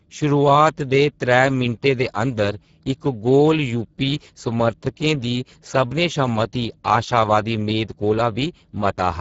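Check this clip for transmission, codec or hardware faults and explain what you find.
One codec fault runs through the whole clip: Speex codec damage. From start to finish the speech sounds hoarse and grainy, and nothing reaches above about 7.7 kHz. Speex is a CELP coder that rebuilds speech from a vocal-tract filter plus a coded excitation. At a low setting, one that fits a bitrate near 10 kbps, the excitation gets too few bits, so the voicing turns noisy and hoarse.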